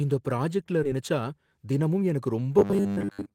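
At 0.83 s, right after "இந்த பிராஜக்ட்ல", the speech lurches forward with no silence: the sound on either side of 0.83 to 0.85 s is butted straight together, and roughly seven tenths of a second of talk never arrives. This is a skip ahead. Later audio was already queued, and the stretch in between was dropped, cutting the delay by about the same amount instead of filling the hole.

From 0.93 to 1.72 s the talking sounds slightly rushed, running at 107 percent of normal speed while the pitch stays where it was. This is a jitter buffer speed-up. The buffer was holding more audio than its target, so the receiver trimmed many tiny pitch-period slices in a row, about 70 ms in total, to bring the delay back down without any audible jump.

From 2.59 to 3.34 s, right up to the end, the speech turns into a hard, metallic drone at a steady 100 Hz that only loosely tracks the syllables. This is robotic sound from repeated short buffers. 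The likely cause is audio arriving too rarely, so playback loops the last fragment, which fits a 10 ms buffer, over and over. Most of that stretch is repeats rather than real audio.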